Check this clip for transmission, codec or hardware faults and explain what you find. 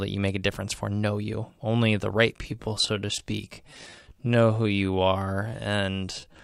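One fault is present: a time-stretched section from 2.31 s to the end at 6.44 s. The speech abruptly slows to about 0.69 times its pace while pitch holds steady, sounding dragged. This is likely software lengthening audio by repeating short segments.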